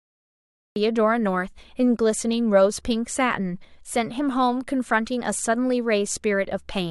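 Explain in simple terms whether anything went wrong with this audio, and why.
Cut-off start, at 0.76 s: the recording began late, so dead silence gives way abruptly to speech already mid-sound, with no natural build-up at its onset.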